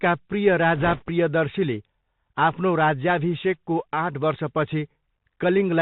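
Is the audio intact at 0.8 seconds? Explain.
No. From 0.76 to 1.03 s there are bit errors on a Bluetooth voice link. Flipped bits, on the order of a few percent, corrupt the one-bit delta stream. Each bit has the same small weight and its effect fades, so the result is a rushing crackle rather than the sharp clicks or gaps of dropped packets.

Underneath, the Bluetooth CVSD headset codec is plainly audible for the whole clip. Its one-bit up-or-down steps, which fit a 64 kbps stream, cut everything above 4 kHz, leave a granular hiss, and turn s sounds scratchy where loud high sounds outrun the adaptive step. That slope-overload grit sets it apart from a simple low-pass filter.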